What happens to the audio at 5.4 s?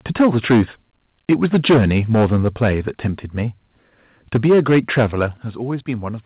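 At 5.37 s the software likely stepped the microphone volume down, cutting the device's input gain in a single jump rather than fading it. The result is an abrupt drop of about 8 dB: the speech and the background behind it both become quieter at the same instant and stay at the lower level afterwards. The call path's band limit at 4 kHz, which fits G.711 mu-law, is unchanged across the step.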